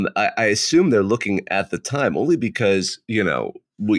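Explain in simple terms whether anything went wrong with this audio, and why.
Nothing went wrong here: the recording stays steady and continuous the whole time, with no breaks, glitches or sudden changes in how the sound comes across.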